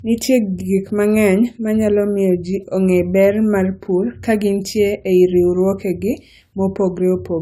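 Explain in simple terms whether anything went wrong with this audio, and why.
The whole clip has generation loss. The speech sounds swirly, hollow and a bit smeared, the starts of sounds are blurred, and nothing comes through above about 18 kHz. That's likely from being squeezed and re-saved with AAC around five times, each pass adding new damage.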